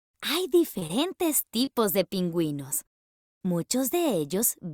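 Short concealed packet loss at 0.79–0.83, 0.87–0.91, 1.41–1.45 and 1.65–1.69 s: each time about 20 ms of audio arrived too late, and the receiver extended the preceding sound to fill it, leaving a brief smear or wobble.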